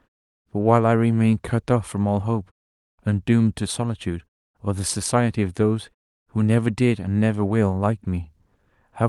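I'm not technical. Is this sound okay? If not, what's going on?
Yes, no faults: the speech came over an ordinary internet call, which trims the highest frequencies above about 12 kHz, and the background drops to silence in the pauses, both normal for that kind of connection.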